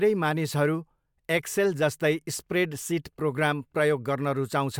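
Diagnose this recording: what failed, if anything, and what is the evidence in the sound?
Nothing stood out on listening: the speech comes through without any audible disturbance in any stage of the chain.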